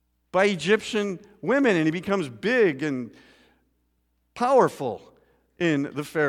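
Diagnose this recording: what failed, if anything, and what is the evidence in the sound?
Nothing failed: the speech signal stays continuous and stable throughout, with no dropouts, discontinuities or level anomalies at any stage of the chain.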